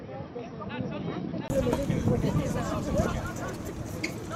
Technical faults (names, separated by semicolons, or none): input switched to a poorer device